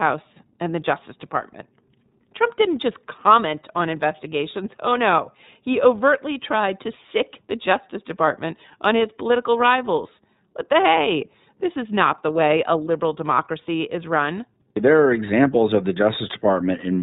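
Speech coded through the iLBC codec for the whole clip, with plainly audible damage: the voice sounds narrowband, slightly rough and synthetic. A spectrogram shows nothing above 4 kHz, and the codec runs 30 ms frames at roughly 13 kbps.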